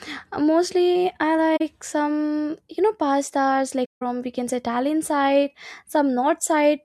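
Around 1.56 to 1.61 s the speech drops into a short soft-edged gap, then a longer one from 3.85 to 4.02 s. That's AAC frame loss with muting: the decoder zeroed the missing spectrum, roughly two frames then eight, and overlapping windows fade it out and back.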